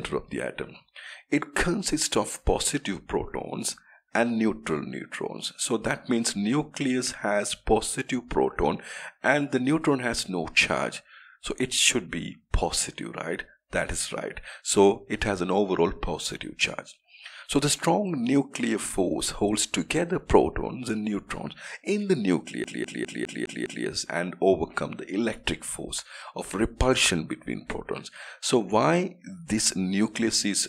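At 22.64 s the CD gets stuck on one turn: a scratch keeps kicking the laser back, so about 0.2 s of audio repeats six times, a quick even stutter until 23.86 s.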